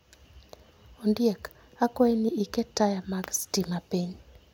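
No technical faults can be heard anywhere in the speech recording. Nothing in the signal chain draws attention to itself at any point.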